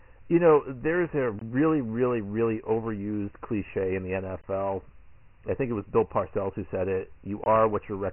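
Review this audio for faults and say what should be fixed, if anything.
Throughout, the speech carries a gritty hiss that trails every syllable, and nothing is heard above about 2.9 kHz, leaving it muffled and thin. This is Dialogic VOX ADPCM with heavy coding damage: each sample is squeezed into a coarse 4-bit step, and that step noise rides on the speech as grit. The narrow band fits a 6,000-samples-a-second VOX file at about 24 kbps. To prevent it, keep a wideband master and encode VOX only as the final delivery step.

Three short holes interrupt the sound at 1.39–1.41 s, 4.41–4.44 s and 7.44–7.46 s, each about 23 ms long and about 3.02 s apart. This is a gap between chunks: the audio was handled in 3-second blocks, and silence was inserted at each join, likely from padding or late playback of each block. To prevent it, join chunks sample-accurately and trim any padding before concatenating.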